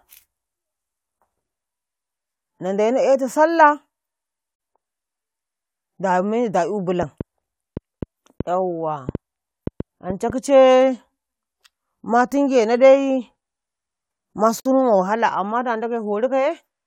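Speech clip. Pieces encoded separately and joined untrimmed leave a gap at each join of encoded pieces: silences of 46 ms at 4.55 s and 54 ms at 14.60 s, ten seconds apart, cutting the sound before it resumes. After "da meyi da'yu", something, likely interference from nearby equipment or a faulty connection or power supply, injects a train of clicks from 7.03 to 10.31 s: around ten similar pops at an uneven pace of about three per second, about 10 dB above the speech.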